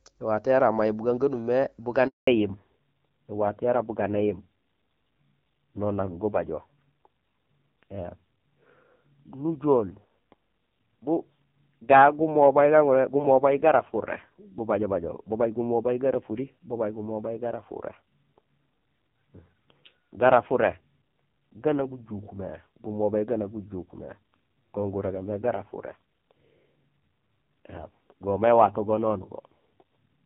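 At 2.07 s, after "yara may bugaan gamimé", a handover gap cuts the speech for 200 ms while the call switches networks, and nothing spoken during it survives. From 2.27 s to the end, a fallback to narrowband from AMR-WB at 12.65 kbit/s to AMR-NB at 5.9 kbit/s removes everything above 4 kHz, so the voice turns dull and rough.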